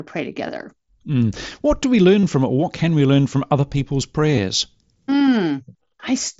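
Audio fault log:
0.48 s, 2.21–2.23 s, 4.36 s: concealed Bluetooth headset packet loss. Headset audio went missing for about 7.5 ms, 30 ms and 15 ms. The phone filled each gap by repeating the closest-matching recent waveform cycle. The first is nearly inaudible. The second, between "do we" and "from it", buzzes briefly at full level and warbles as real audio resumes. The third follows "learn from other people's". A waveform shows copied periods at steady amplitude, and a spectrogram shows flat, smeared harmonics through each fill within the mSBC wideband band.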